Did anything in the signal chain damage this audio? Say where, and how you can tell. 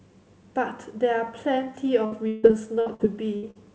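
Yes, network stage: repeated packet loss from 2.06 to 3.57 s. Seven gaps, the longest 158 ms, are patched with stretched sound, giving choppy speech with pieces missing.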